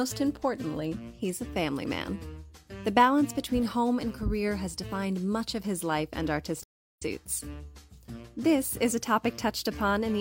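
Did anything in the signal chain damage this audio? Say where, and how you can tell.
Yes. The damage is at the codec stage: AAC frame loss with muting. From 6.6 to 7.03 s the audio fades into silence and fades back, a hole of about 384 ms with soft edges. That fits a run of nine lost frames. The decoder zeroed their spectrum, and overlapping windows smoothed the edges.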